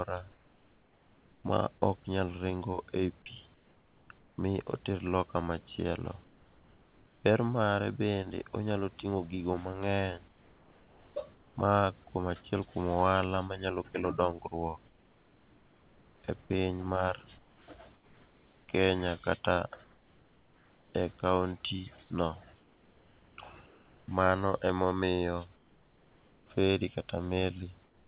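The sender's voice detector likely switched off transmission during pauses (discontinuous transmission), so the receiver filled the gaps with comfort noise in place of the background. The real room noise, well below the speech, gives way to a steady, featureless noise from 0.32 to 1.44 s, about 4 dB quieter, ending just before "ma ok". It happens again from 3.54 to 7.24 s, ending just before "ber mare bende onyalo"; from 10.28 to 11.56 s, just after "onyalo ting'o gigo mang'eny"; and from 13.92 s to the end of the clip. Each time the background goes flat and lifeless until the sound resumes.

At 13.92 s the sound is dropped by the voice detector, likely because it took the sound for background and stopped sending. About 20 ms of sound is lost and replaced by comfort noise, just as the final long stretch of synthetic noise begins. Across the whole call path, narrowband G.711 coding leaves nothing above 4 kHz.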